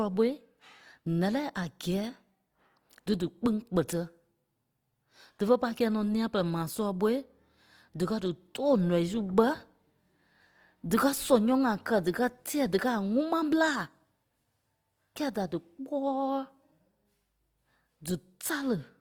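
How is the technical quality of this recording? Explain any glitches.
The recording has one audible fault, present throughout the speech. Opus compression, from start to finish: the sound is grainy and rough, the likely result of Opus in its CELT music mode at a low rate, roughly 24 kbps. The full band to about 20.3 kHz survives, but starved bands are filled with folded or noisy content.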